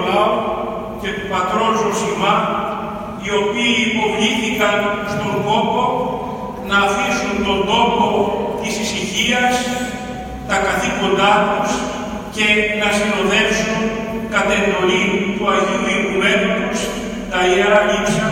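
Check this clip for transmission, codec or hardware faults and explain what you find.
Nothing audible points to a transmission, codec or hardware problem anywhere in the clip.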